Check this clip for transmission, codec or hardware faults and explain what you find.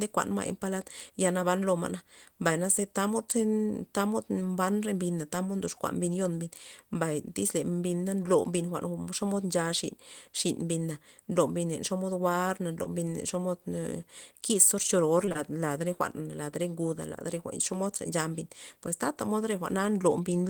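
There are transmission faults: short concealed packet loss at 12.83–12.87 s and in three back-to-back gaps at 15.25–15.29, 15.29–15.32 and 15.32–15.37 s, just before "lad re". Each gap was about 20 ms of missing audio that the receiver patched by extending the preceding speech, so each sounds like a brief smear or wobble, with the run at 15.3 s giving a longer wobble.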